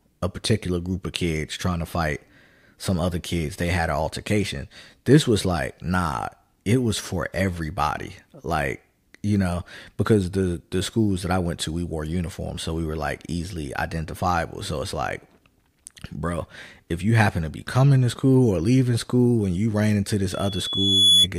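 At 12.56 s, between "went to we wore" and "so we were like", compressed frames are skipped: about one 23.2 ms frame never reaches the output, so the audio jumps ahead. A waveform shows a discontinuity at the join.

From 20.31 s to 21.27 s, right after "and you ran into", a loudspeaker feedback squeal takes over. The microphone-to-speaker loop runs away at 3.4 kHz, and a tone builds over roughly 0.7 s to about 10 dB above the speech. On a spectrogram it appears as a single bright horizontal line.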